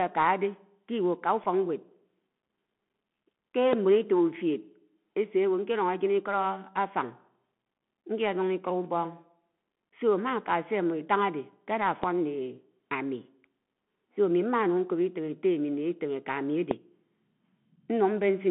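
The speech runs throughout through the Bluetooth CVSD headset codec, the narrowband headset path that fits a 64 kbps link. Each sample is coded as a single up-or-down step whose size adapts. Everything sits inside roughly 150 Hz to 3.4 kHz, so the top end is gone. The damage is plainly audible. Sibilants come out scratchy, louder bright passages break up where the step size cannot keep pace, and a grainy hiss sits underneath the speech.

At 1.44 s a Bluetooth headset packet is repeated. About 7.5 ms of audio was lost on the link, which fits two lost packets. The chip filled the gap by decoding the previous packet's data again. Because the gap is so short, it comes through as a brief tick or a flicker of buzz rather than a sustained tone, and the speech continues straight after it.

Three loud pops follow, at 3.73 s, 12.03 s and 16.71 s. Each is a single sharp transient lasting about 20 ms. 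The first and last peak about 20 dB above the surrounding speech, and the one at 12.03 s is stronger at about 25 dB. The speech carries on underneath each one. The likely cause is a sudden voltage step or pulse entering the signal chain, for example from static, a contact or a driver glitch.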